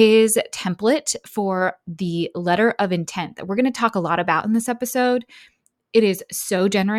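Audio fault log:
No fault can be heard anywhere in this speech recording. There is nothing to log for this clip.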